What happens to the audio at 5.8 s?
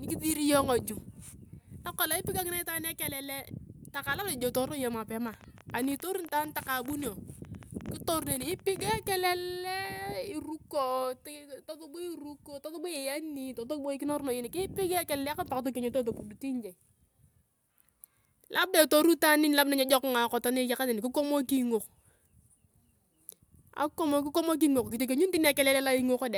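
At 5.8 s you're inside a train of clicks that runs from 5.28 to 8.92 s. Over those three and a half seconds there are about forty sharp ticks, roughly 11.6 a second but unevenly spaced, each peaking at about the level of the speech itself, so they pop through clearly, gaps included. The same-shaped repeated pulses point to something injecting them, likely interference from nearby equipment or a faulty connection or power supply.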